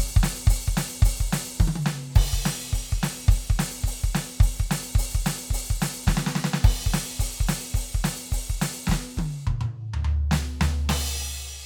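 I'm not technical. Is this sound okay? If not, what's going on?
Yes, this music sounds fine, with nothing wrong to point to at any moment. There are no dropouts, glitches or other problems to explain.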